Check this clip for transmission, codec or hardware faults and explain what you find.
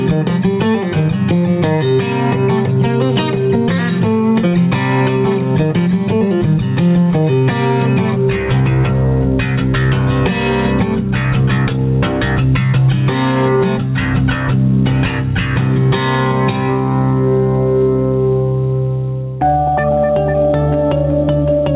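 One fault runs through the whole clip: gain pumping. The gain swings by around 10 dB, pulled down under each loud sound, likely from excessive input gain driving a fast limiter. The band stops at 4 kHz, which fits a narrowband call codec such as G.711.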